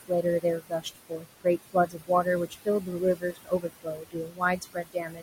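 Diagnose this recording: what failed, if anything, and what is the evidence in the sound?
Call processing is at fault: the noise suppressor is lowering the steady background by about 19 dB frame by frame, so the room noise, about 11 dB under the speech, sinks between phrases and rises beneath them. On a spectrogram the noise floor shows as flickering, patchy blotches instead of an even haze. These are noise suppressor artifacts.

Speech cut by the noise suppressor appears from 0.0 to 1.26 s, 1.44 to 2.26 s, and 2.5 s to the end, with drops of about 20 to 21 dB. It totals roughly 0.4 s, 0.3 s, and one and a half seconds. Misjudging soft consonants and word endings as noise, the suppressor swallows them. The waveform shows truncated tails, and the spectrogram shows weakened energy where those sounds fall.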